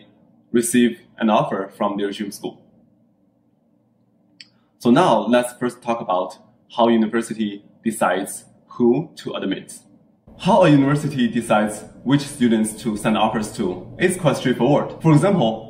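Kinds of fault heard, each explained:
Periodic USB or driver dropouts: ticks once a second from 12.0 to 15.0 s, where a tiny sliver of audio is skipped as the driver briefly stalls.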